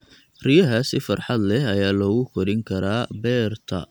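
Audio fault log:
No faults heard anywhere in this speech recording.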